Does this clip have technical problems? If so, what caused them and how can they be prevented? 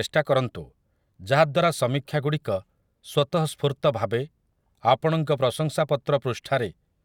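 No, there are no technical problems in this recording.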